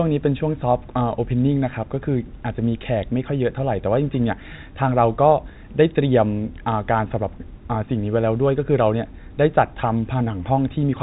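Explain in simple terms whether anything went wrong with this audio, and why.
Nothing went wrong here: the speech has the ordinary narrow sound of a landline call in standard G.711 telephone coding, which passes everything below about 3.8 kHz and is how a phone line is meant to sound.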